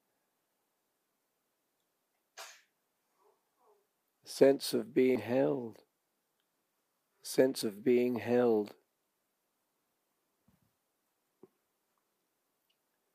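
At 5.16 s the audio jumps ahead, with something like 150 ms missing. It happens again at 7.62 s with a shorter skip of around 50 ms, and once more at 10.12 s with roughly 150 ms gone. That's most likely a dropped buffer (overrun): the hardware overwrote samples before they were read, so the two sides get butted together with no gap.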